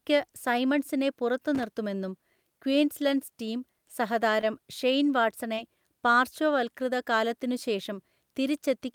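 From 1.55 to 1.64 s, loose connector crackle: a worn or dirty contact in the signal path briefly made and broke connection, chopping the speech into a short, irregular burst of scratchy crackle lasting just under a tenth of a second.

At 4.43 to 4.45 s comes a lost packet rebuilt from error correction. A 20 ms packet never arrived, so the decoder played the lower-quality backup copy carried inside the following packet. There is no gap, but those 20 ms sound rougher and noisier.

From 5.55 to 5.59 s, a short concealed packet loss follows. About 20 ms of audio missed the decoder, and the receiver filled roughly 18 ms of it by extending the preceding sound before blending back in, leaving a brief smear in the speech. Within that span, 5.57 to 5.59 s was again rebuilt from error correction, adding a short stretch of the same coarser, noisier texture as the repair completes.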